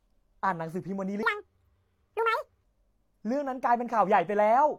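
A likely clock mismatch plays 1.23 to 2.64 s as a section at the wrong speed: 1.96 times fast, about ten semitones higher, hurried.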